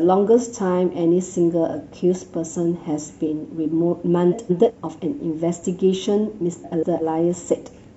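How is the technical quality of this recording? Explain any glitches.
The recording has two short glitches, both from frames out of order. At 4.31 to 4.71 s and again at 6.64 to 7.02 s, two neighbouring blocks of roughly 186 ms each reached the decoder swapped and were played in that order, which fits two runs of four frames each. Each 0.4 s stretch therefore plays its second half before its first, giving a garbled flutter in the speech. No time is lost from the clip.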